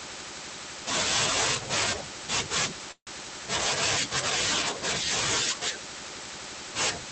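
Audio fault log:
2.91–3.09 s, call audio freeze: the sound stops and is replaced by a buzzy or hissy continuation of the preceding sound that fades to roughly 70 ms of silence before the audio resumes where it left off. Nothing is lost; about 154 ms has been inserted, pushing everything after it later by the same amount. The likely cause is delayed packets draining the jitter buffer, leaving the receiver to extend the last sound until data arrived over a call path band-limited to about 8 kHz.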